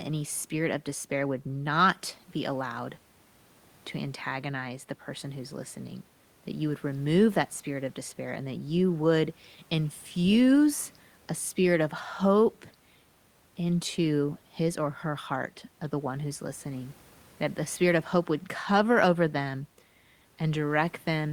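No technical faults can be heard anywhere in this recording.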